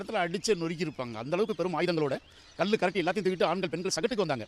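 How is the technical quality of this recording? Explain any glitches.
There's one real glitch. From 1.26 s to the end, a time-stretched section runs about 1.56 times faster at unchanged pitch, likely from software dropping short pieces, so it sounds rushed.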